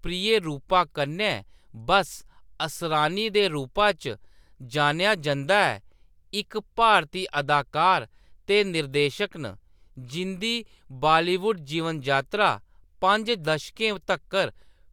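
Speech, with no technical faults to report.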